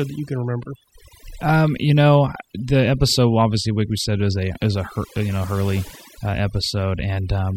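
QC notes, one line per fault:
Throughout: overdone noise removal. A noise reduction stage was run far too aggressively on a noisy speech recording, pulling individual frequency bands down or out entirely whenever their level sat close to its noise estimate. Low-level parts of the speech fell inside that threshold and were stripped along with the noise. The background drops and breaks up into twinkling, chirpy specks.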